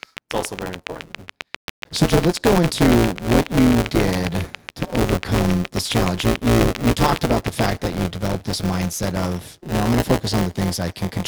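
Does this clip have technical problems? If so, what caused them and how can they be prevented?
Yes. Buffer tearing runs through the whole clip: the writing program and the playback hardware have slipped and cross inside each period, which fits a 256-sample buffer. About a fifth of every buffer replays audio from roughly 10 ms earlier, giving a robotic 172 Hz buzz on the speech. Prevent it by keeping the writer locked to the hardware read pointer, with enough buffer headroom.

A train of clicks runs from 0.03 s to 7.60 s, ending just before "that you developed this". The likely cause is interference from nearby equipment or a struggling interface, injecting some fifty evenly spaced pulses at 7.27 per second, about 15 dB above the speech. They tick through pauses as well as speech. Prevent it by separating cables from noisy equipment and checking the interface's power and connection.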